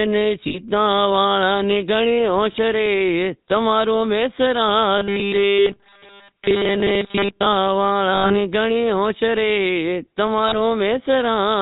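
The whole recording carries the GSM full-rate codec sound, plainly audible, which fits the old 13 kbps full-rate coder. It rebuilds speech from a vocal-tract model fed by a sparse, regularly spaced pulse train, so the speech gets that gravelly, buzzy grain. Nothing comes through above 4 kHz, so the top end is dull and boxy.

Lost GSM frames come first at 0.48 to 0.57 s, about 60 ms of gap, which fits three frames. The decoder keeps replaying the last good frame's parameters, so instead of a dropout you get a brief rough, metallic ring. A shorter one at 2.52 to 2.57 s, about 20 ms, is just a quick grainy blip.

From 4.98 to 7.46 s the speech turns into robotic sound from repeated short buffers. It's a rigid, metallic buzz at 200 Hz that still loosely tracks the words. That's likely the playback side getting audio too rarely and looping a tiny chunk, and the 200 Hz pitch points to a loop of about 5 ms. 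Most of the real audio in that stretch is skipped.

Inside that stretch, another lost GSM frames event at 5.5 to 5.67 s, about 80 ms, adds its own ringing smear on top of the buzz. At 8.14 to 8.36 s there's about 140 ms of loss scattered over roughly 160 ms, with the longest run near 100 ms. The last one, at 10.48 to 10.54 s and about 40 ms long, is a short metallic hiccup.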